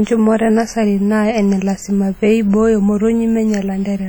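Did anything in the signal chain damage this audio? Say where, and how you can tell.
Yes. WMA compression damage runs through the whole speech clip, likely from the codec stage. It rings and washes, with hiss breathing alongside the signal and weak detail gone. Damage this heavy fits about 32 kbps, where long transform blocks smear quantisation noise over tens of milliseconds.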